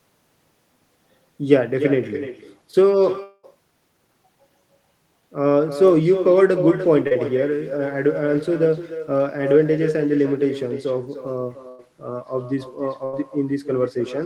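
Throughout the speech, every phrase is trailed by a quieter, thinner copy arriving roughly a third of a second later, at about 10 dB below the direct voice. This is echo with no canceller: the far end's loudspeaker feeds its microphone and the returned signal is never subtracted. Unlike room reverberation, which smears continuously, this is a distinct delayed repeat with a fixed lag, so syllables audibly double.

From 3.23 to 3.45 s the sound stops and is replaced by a continuation of the last sound that fades over about 0.2 s, ending in roughly 20 ms of near-silence before speech resumes. The speech picks up further on, with the gap's content simply gone. This is likely a long network dropout. What sets it apart from a short loss is the length of the fading tail.

At 7.07 to 7.13 s there is short concealed packet loss: about 40 ms never reached the decoder, and the receiver bridged it by extending the preceding sound and blending back in. 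The result is a brief smear or wobble rather than an audible gap. It is too short to fade toward silence, and a quick consonant can disappear inside it.

Two bursts of packet loss follow, at 11.69 to 11.80 s (100 ms missing) and 13.04 to 13.15 s (80 ms missing). In each, the last sound is held as a buzz or hiss and turned down across the gap, then speech jumps ahead. They sit between the other two losses in length: long enough to hear the held sound dimming, but without the near-silent tail of the dropout at 3.23 s.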